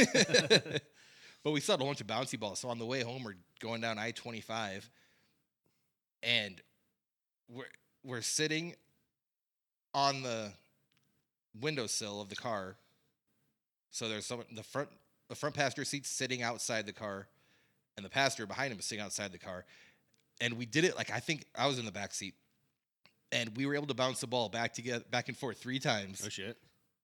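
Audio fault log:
No faults found in this speech clip.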